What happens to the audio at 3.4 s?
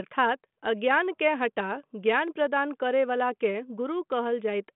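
Nothing goes wrong at 3.4 s; the speech there is intact, carried through the same narrow telephone band of the G.726 ADPCM line as the rest of the clip, with no dropout, click or added distortion.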